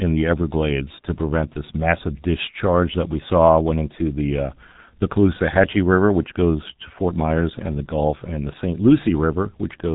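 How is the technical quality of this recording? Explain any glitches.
Quality is poor throughout, from G.723.1 codec damage. Nothing above 3.8 kHz survives, so the speech sounds muffled and hoarse. Consonants blur because the coder updates its voice model only every 30 ms frame. The heavy damage fits a rate near 6 kbit/s.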